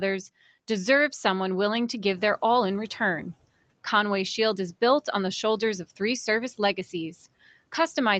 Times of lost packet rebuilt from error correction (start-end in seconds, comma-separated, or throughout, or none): none